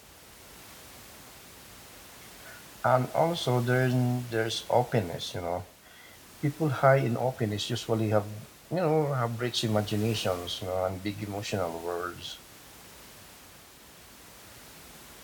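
No technical faults can be heard in this speech recording; the only thing beneath the speech is the room's own background noise, which sits about 21 dB lower.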